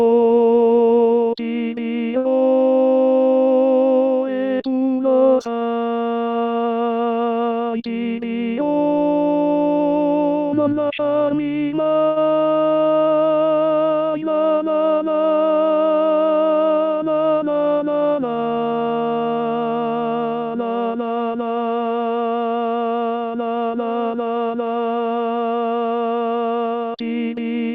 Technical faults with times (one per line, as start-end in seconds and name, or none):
2.17-2.27 short stall from a late packet
7.97-8.94 jitter buffer speed-up
12.07-12.18 short stall from a late packet
17.92-18.88 jitter buffer speed-up